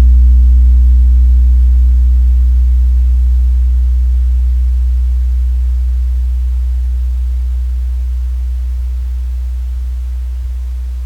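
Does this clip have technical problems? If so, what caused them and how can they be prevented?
No, the signal shows no technical faults, with its level, continuity and tonal balance all holding steady throughout.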